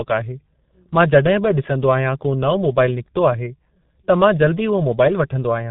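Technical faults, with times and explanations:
Throughout, G.723.1 codec: the speech sounds muffled and hoarse, with consonants smeared together and heavy coding damage. Nothing survives above about 3.9 kHz, so sibilants and crisp attacks lose their brightness. The low-bitrate coding, which fits a rate near 6.3 kbit/s, packs the sound into 30 ms frames and refreshes its vocal model only slowly, so quick changes blur into one another.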